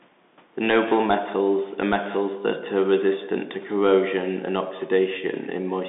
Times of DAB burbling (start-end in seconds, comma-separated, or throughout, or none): none